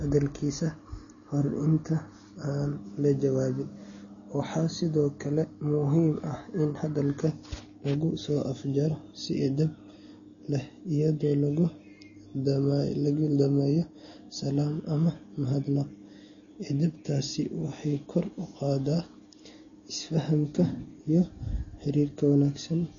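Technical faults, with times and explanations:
Throughout, likely MP3 compression: the speech stops dead above 6.9 kHz and sounds plainly watery and swirly, which fits a starved bitrate around 32 kbps.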